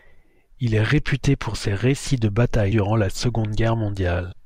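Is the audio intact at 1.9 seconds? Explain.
Yes, the speech plays through cleanly at 1.9 s, with no audible fault at that moment.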